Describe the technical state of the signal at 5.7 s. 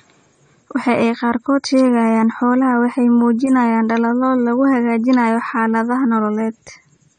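At 5.7 s the speech sounds dull and smeared, with nothing above 9 kHz and plainly audible codec damage that runs through the whole clip. This is likely AAC compression, AAC-LC at a rate that fits about 32 kbps, which coarsely quantises each frame's spectrum and discards the top band.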